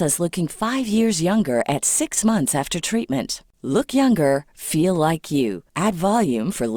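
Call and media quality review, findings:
Sample clock jitter, whole clip: fine hiss and grit riding on the speech, worse on loud and bright passages, gone in the pauses. Converter clock wobbling around 2 µs, so samples land off-time; error sits about 30 dB under signal.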